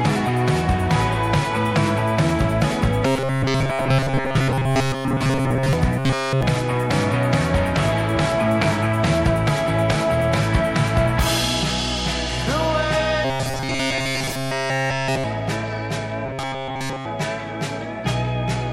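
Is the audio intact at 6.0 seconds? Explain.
No. From 5.98 to 6.43 s the sound becomes a rigid, metallic 134 Hz buzz: robotic sound from repeated short buffers, likely one 7.5 ms chunk looped while fresh audio was skipped.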